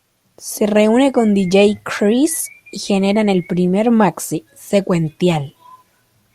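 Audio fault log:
No faults are present in this speech recording, and the signal path shows nothing that needs correcting.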